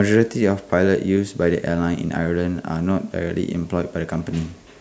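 From 0.05 to 0.79 s, automatic gain falling: the gain control judged the input too loud or its background too strong and pulled its level down about 4 dB, so the speech and its background sink together.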